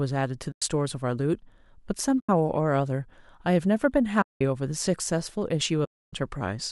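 Speech drops out in four soft-edged gaps, a case of AAC frame loss with muting. The holes fall at 0.52 to 0.62 s, 2.20 to 2.29 s, 4.22 to 4.41 s, and 5.85 to 6.13 s, lasting 100, 90, 190 and 280 ms. The decoder zeroed the missing frames' spectrum. The overlapping windows fade the sound out and back in. The 10 ms frames point to a low-delay AAC stream, likely AAC-ELD.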